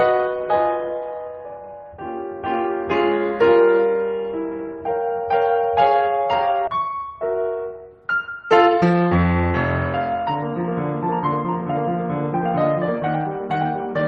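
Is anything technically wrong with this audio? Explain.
Yes, there are two faults.

At 6.67 to 6.69 s there is a skip ahead. About a second of music was dropped, either in transit or by an overflowing jitter buffer with later audio already queued. Playback jumps straight to the later material with no fill, so the music lurches forward.

From 8.30 to 9.48 s there is a jitter buffer speed-up. The receiver drained excess buffered audio by cutting short pitch-period segments repeatedly, removing roughly 0.4 s. Playback runs at about 134% speed without a pitch change, so the music sounds hurried and its tempo falters.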